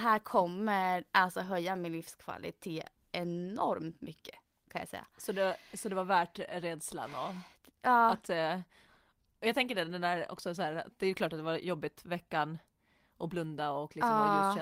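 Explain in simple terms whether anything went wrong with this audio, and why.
Nothing went wrong here: listening through the speech turns up no audible technical faults anywhere in the recording.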